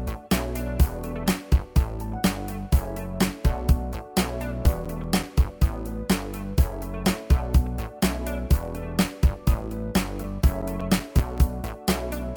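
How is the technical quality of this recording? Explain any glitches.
Two short runs of CD scratch ticks mar the recording, from 4.28 to 5.61 s and from 9.85 to 11.57 s. A scratch defeats the disc's error correction once per revolution, so the player conceals the lost samples. The result is about six evenly spaced ticks per second, each lasting up to about 10 ms, of uneven strength. That steady rotational rhythm distinguishes them from the random clicks of vinyl crackle.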